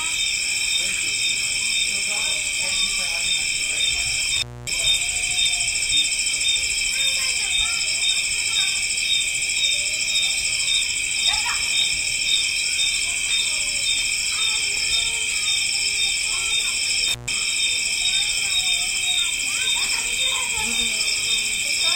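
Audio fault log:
4.36–4.73 s and 17.08–17.34 s, intermittent contact: a loose connection opens for 0.25 s, then 0.14 s, dropping the sound with crackle at each edge and faint hiss between.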